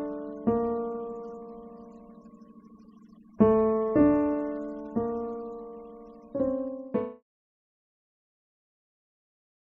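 The music signal shows no technical faults, and the smooth fade-out that begins at around 6 s and reaches silence at 7.23 s eases the level down gradually without any click or abrupt edge.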